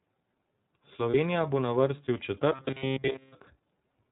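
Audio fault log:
throughout: iLBC codec. The sound is band-limited to narrowband, with nothing above 4 kHz, and has a plainly audible rough, slightly synthetic grain. The grain fits iLBC's 30 ms frame mode at about 13.3 kbps. Distinct from dropouts or buzz, this coloration never comes and goes. It is present across the whole clip.
1.10–1.14 s and 3.12–3.15 s: lost iLBC frames. At each point one 30 ms frame goes missing. The decoder covers the gap by repeating the last pitch cycle blended with noise, so it sounds like a brief held, faintly breathy vowel. The first gap falls just before "bo na vrsti v". The sound recovers at once afterwards because iLBC frames don't depend on their predecessors. That instant recovery, and the short 30 ms span, separate these losses from the long buzzing stretch.
2.54–3.35 s: robotic sound from repeated short buffers. Right after "bo na vrsti v", the sound turns into a rigid metallic buzz at 133 Hz lasting about 0.8 s. 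The likely cause is the playback path replaying the same short chunk of audio while fresh data fails to arrive, with essentially all of the stretch made of repeats. A 133 Hz buzz points to a buffer of about 7.5 ms. Unlike the codec's frame concealment, this pitch is fixed rather than following the original, and it persists far beyond 30 ms.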